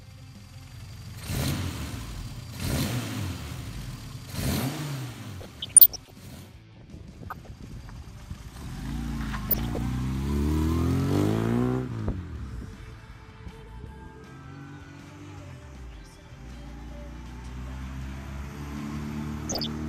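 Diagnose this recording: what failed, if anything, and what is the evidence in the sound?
DAB burbling at 5.41–6.12 s, 7.22–7.52 s, 9.41–9.81 s and 19.49–19.66 s, a failure at the reception and MP2 decoding stage. The longest run is near 5.4 s, and it suggests some thirty damaged frames. Weak reception let bit errors slip past error correction, at worst around one bit in a hundred. They corrupted samples, so single sub-bands get short blips of noise.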